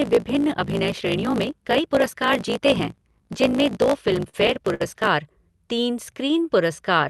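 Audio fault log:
0.00–5.09 s, block size mismatch (truncated): One stage hands over longer blocks than the next one takes in, so the tail of every block is discarded. The regular cut points produce a buzz at about 54.4 Hz, which fits 1024-sample blocks being written. Because part of each block never reaches the output, the speech runs about 1.16 times fast, yet its pitch stays close to normal, since what remains is played at the correct rate.
4.09–4.82 s, repeated stalls (stutter): Packets came late or too slowly for playback, and the jitter buffer ran dry seven times. Each time, the receiver stretched the last sound to cover the wait, for about 147 ms in total and up to 59 ms in a single gap. That covers roughly a fifth of this stretch. No speech is lost, but the sound stalls and restarts repeatedly, giving it a dragging, stuttering feel.
6.23–6.58 s, jitter buffer slow-down: The receiver built up reserve in its jitter buffer by repeating single pitch periods or bits of pauses many times in a row. 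This added about 37 ms and slowed the speech to about 92% of normal speed. Pitch is unchanged because whole cycles are duplicated rather than resampled, so sounds come out drawn out.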